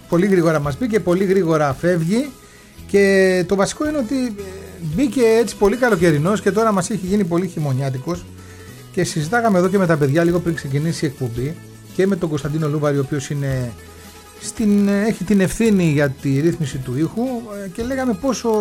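From start to finish, a steady buzz sits under the sound at about 46.9 Hz. This is a padded block size mismatch. One stage hands over blocks slightly shorter than the next stage reads. The missing part of each block is filled with zeros, so a tiny gap lands in every block. The buzz rate fits a 1024-sample read block. The gaps stretch the audio only slightly, running at 0.999 times normal speed.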